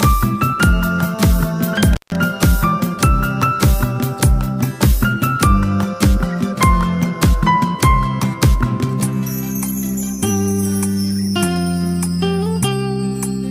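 At 1.93 s the audio drops out suddenly. This is an intermittent contact, and it lasts until 2.16 s. A loose plug or cable connection lets the signal path break for a moment. The line stays open for about 150 ms inside that span. Crackle marks the edges as the contact scrapes apart and then meets again. While the connection is broken the sound is gone, and a faint hiss remains.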